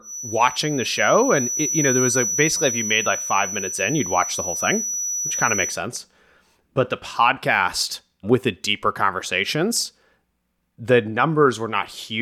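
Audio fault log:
0.00–5.82 s, feedback whistle: a thin 5.9 kHz tone at one pitch that slowly swells and fades, just below the speech level, likely a loudspeaker-to-microphone loop sitting right at the feedback point.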